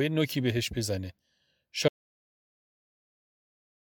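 At 1.88 s the speech drops out to dead silence, no room tone at all, through the end; that's an audio dropout to silence, likely a lost input.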